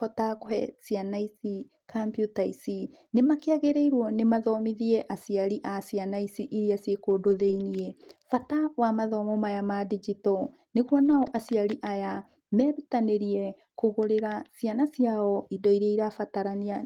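Short concealed packet loss at 0.37 to 0.41 s: about 20 ms of the call arrived too late for the decoder, which bridged the hole by extending the preceding sound and then crossfading back, leaving a brief smear or wobble right at the start.

Lost packet rebuilt from error correction follows immediately at 0.41 to 0.51 s, then recurs at 3.61 to 3.75 s, 7.27 to 7.61 s and 11.05 to 11.39 s. Each time, lost packets were replaced by low-bitrate copies carried in the next packet, so nothing drops out. Those stretches, 60, 80, 180 and 180 ms long, sound rougher and noisier.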